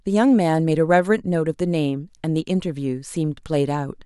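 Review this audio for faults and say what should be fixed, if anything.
Nothing stood out on listening to this speech recording, so there is nothing to fix.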